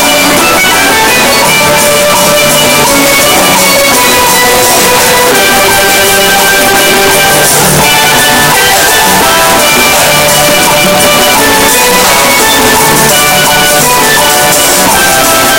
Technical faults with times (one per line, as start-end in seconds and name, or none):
0.00-15.58 signed and unsigned mixed up